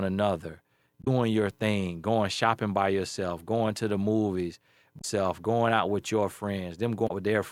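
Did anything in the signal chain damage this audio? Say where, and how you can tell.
Yes: damaged data in the compressed stream at 1.01–1.08, 4.98–5.05 and 7.04–7.11 s. Corrupt frames make the decoder misread them and lose sync until the next header.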